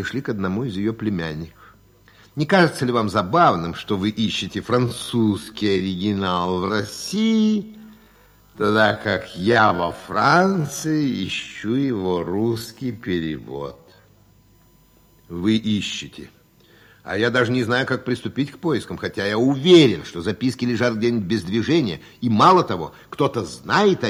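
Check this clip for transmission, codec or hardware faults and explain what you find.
Two faults are present: a steady whine through the whole clip and a slowed stretch in the middle.

A thin, fixed-pitch whine runs from start to finish, built on 1 kHz with its strongest component up at 15 kHz, sitting about 45 dB below the audio. This is USB whine, where current drawn in 1 ms bus frames leaks into the audio through shared power or ground.

From 4.82 to 14.06 s the pace suddenly drags to 0.569 times normal speed while the pitch holds steady. This is likely a time-stretched section, with software repeating short pieces to lengthen the audio without lowering its pitch.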